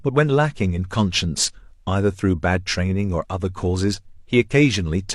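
A short recording of speech with no technical fault audible anywhere in it. Nothing in it needs a time or a cause to be pointed out.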